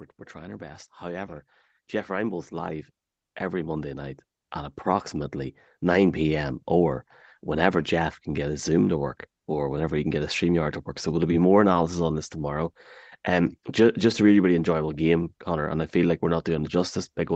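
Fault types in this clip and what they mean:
Automatic gain rising: the gain control judged the input too quiet and slowly raised its level, so from 0.32 s to 6.27 s the speech and background noise swell together by about 15 dB, levelling off just before "or whenever".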